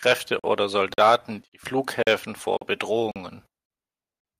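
Hard-edged silences of 44 ms appear at 0.39, 0.94, 1.48, 2.03, 2.57, 3.11, 3.66 and 4.20 s. This is a gap between chunks after every 0.5 s of speech. Each join is delayed rather than trimmed, so no speech is lost, but it stutters at a steady rhythm.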